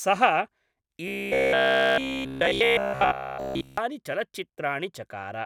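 A speech clip with robotic sound from repeated short buffers between 1.08 and 3.78 s. Throughout that stretch the voice becomes a rigid, metallic buzz near 66.8 Hz that roughly tracks the words. The likely cause is audio arriving too slowly, so the software loops the last fragment, about 15 ms long, while fresh audio is dropped. A spectrogram would show flat, evenly spaced harmonic lines at multiples of 66.8 Hz, and the waveform would show the same short cycle repeating.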